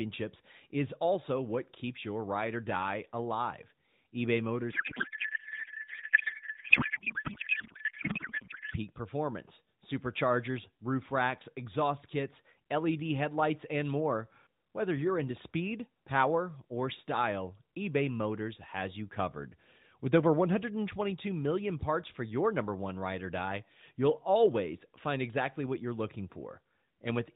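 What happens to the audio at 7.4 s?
At 7.4 s the speech is replaced by garbled noise and warble that hardly follows it, part of a codec payload misread running from 4.72 to 8.76 s. The AMR frames are packed octet-aligned, but the receiving end reads them as bandwidth-efficient, so the decoder takes every field from the wrong bit positions. The frames still look valid, so it keeps synthesising nonsense until both sides agree on the packing again.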